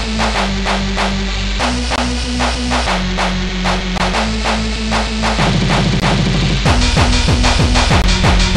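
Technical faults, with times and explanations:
1.96–1.98, 3.98–4.00, 6.00–6.02 and 8.02–8.04 s: gap between chunks, 20 ms of silence inserted every 2 s at each join, giving hard-edged holes.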